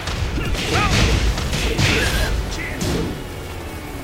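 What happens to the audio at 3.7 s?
Nothing goes wrong at 3.7 s; the audio plays through that moment intact, with no dropout, click or other disturbance.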